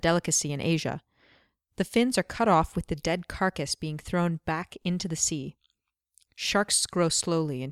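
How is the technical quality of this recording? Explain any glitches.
No glitches can be heard anywhere in the recording. The sound carries on steadily, with nothing breaking in or interrupting it at any point.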